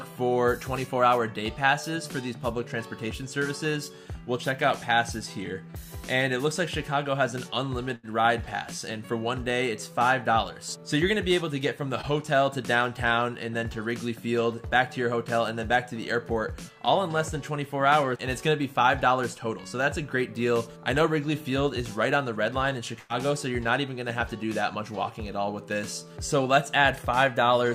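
The audio was sent over a packet network, and twice a run of consecutive packets was lost or arrived too late to play, a burst of packet loss. At 7.95–8.05 s about 80 ms of audio is gone, and at 22.99–23.11 s about 100 ms. In each gap the receiver stretches the last sound it had and fades it down, so a held, dimming smear fills the hole before the audio picks up further along with that stretch missing. Separately, at 12.01–12.05 s a short concealed packet loss drops only about 20 ms. The decoder patches this by extending the preceding sound briefly and crossfading back into the real signal, which leaves a quick smear or wobble where a fraction of the sound has been replaced.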